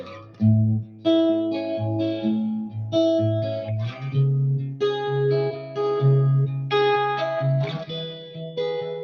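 A noise suppressor applied to music runs through the whole clip. Built for speech, it treats sustained tones and decay as noise and keeps turning them down, so the level swings by roughly 10 dB and the music pumps and thins while attacks pass through.

Sound cut by the noise suppressor hits at 0.0–0.43 s, 0.82–1.06 s, 2.61–2.76 s, 5.52–5.78 s, 6.48–6.72 s and 7.67–8.57 s. Held material sinks by about 8 to 13 dB, deepest at 0.82 s. The final stretch is the longest.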